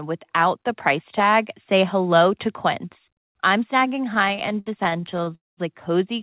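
Speech, heard through a narrowband call path with nothing above 4 kHz, consistent with G.711. From 4.14 to 5.33 s it drags and stutters in over twenty brief stalls, the longest about 60 ms, filling roughly a quarter of that stretch. These are repeated stalls (stutter): packets arrived late, so the jitter buffer kept emptying and the receiver stretched the last sound each time. At 5.35 s the audio then hangs on the last sound as it fades, falling to near silence for most of its 0.22 s before resuming at 5.59 s. This is a call audio freeze, likely from packets held up in transit, which inserts a gap while dropping nothing.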